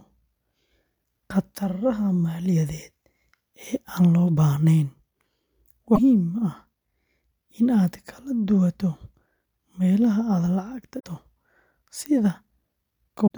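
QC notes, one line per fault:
5.92–5.99 s, 10.96–11.05 s and 13.23–13.30 s, damaged data in a compressed stream: corrupt bytes in the encoded speech make the decoder misread the affected frames, lose sync and hunt for the next valid frame header before it resumes. Each event lasts 70 to 90 ms and is heard as a short chirp, squawk, click or hole. The last one falls just before the end of the clip.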